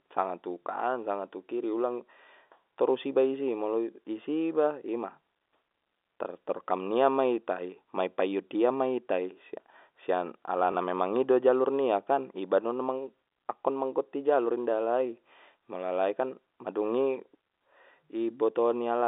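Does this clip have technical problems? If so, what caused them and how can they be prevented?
Yes. At 10.72 to 10.74 s, packet loss with last packet repeated causes a small blip. One 20 ms packet vanished and the previous one replayed. Better loss concealment or forward error correction would prevent it.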